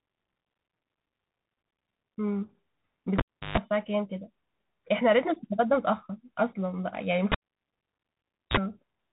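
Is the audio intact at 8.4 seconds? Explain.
No. At 8.4 seconds the sound has dropped to near silence inside a cable pulled and plugged in event running from 7.32 to 8.57 s. A pop at 7.32 s marks the live cable coming out, and roughly 1.2 s of near silence follows. A burst of 60 Hz mains buzz lasting about 36 ms comes as only the tip touches, and a second pop sounds as the signal returns at 8.57 s.

Beneath that, the whole clip carries the Bluetooth CVSD headset codec, which fits a 64 kbit/s headset link. Each sample is coded as a single up-or-down bit with an adapting step size, so nothing above 4 kHz survives. The damage is plainly audible: s sounds turn scratchy, loud high sounds distort as they outrun the step, and a granular hiss sits under the speech.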